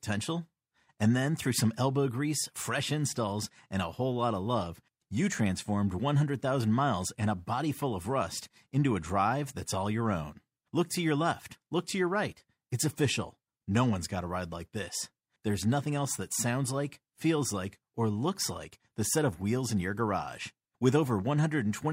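Listening closely to the speech recording, nothing stood out as a technical problem at any point.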